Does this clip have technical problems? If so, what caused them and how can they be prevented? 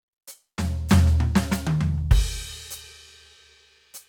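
No, this music clip has no technical problems, so there is nothing to trace to a cause or prevent.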